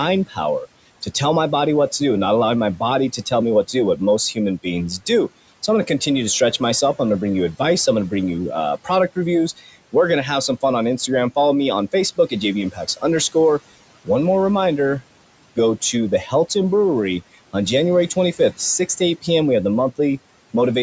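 A noise suppressor acts across the whole clip, cutting the bands it treats as steady noise by about 18 dB. The room noise, about 20 dB under the speech, sinks in the pauses and rises beneath the speech.

The suppressor also mistakes speech for noise, at 0.27 to 0.38 s, 9.57 to 9.76 s and 12.72 to 13.04 s. Roughly 100 to 150 ms is turned down each time, by up to about 16, 12 and 13 dB, so those moments sound swallowed and faint.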